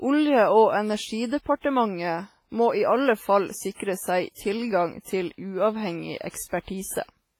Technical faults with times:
0.00-7.40 WMA compression
1.26-1.31 pre-echo
1.59-1.64 pre-echo
4.32-4.37 pre-echo
5.01-5.06 pre-echo
6.18-6.34 pre-echo

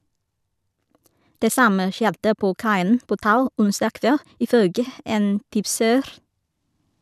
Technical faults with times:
0.00-4.88 time-stretched section

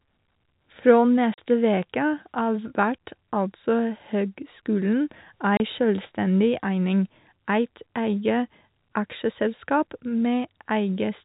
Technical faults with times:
1.34-1.38 packet loss filled with silence
5.57-5.60 packet loss filled with silence

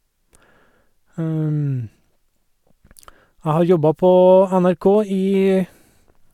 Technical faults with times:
none

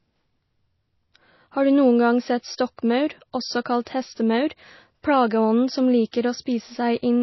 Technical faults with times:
0.00-7.23 MP3 compression
3.85-3.87 pre-echo
6.11 pre-echo

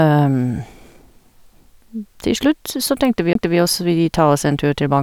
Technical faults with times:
3.33-3.35 CD skip

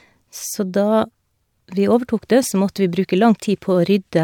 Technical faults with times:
none

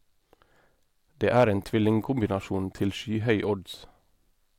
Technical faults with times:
1.37-1.44 hard clipping

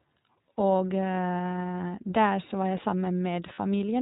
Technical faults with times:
0.00-4.01 iLBC codec
3.54-3.58 lost iLBC frames

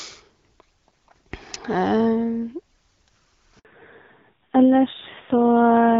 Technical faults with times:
3.59-3.65 handover gap
3.65-5.99 fallback to narrowband

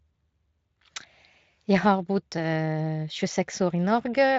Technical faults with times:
none

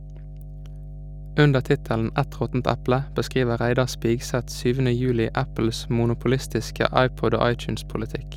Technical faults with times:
0.00-8.36 mains hum

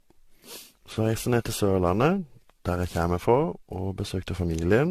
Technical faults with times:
0.00-4.90 generation loss

